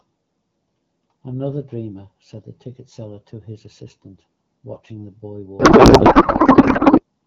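Codec payload misread, from 5.59 s to 7.03 s: the AMR wideband stream, whose clear speech before this point fits the 12.65 kbit/s mode, is packed octet-aligned, but the receiving side unpacks it as bandwidth-efficient. Every field lands in the wrong place, so the decoder builds frames from misplaced bits. The speech gives way to garbled noise and warbling tones that barely track it, lasting until the end of the faulty stretch.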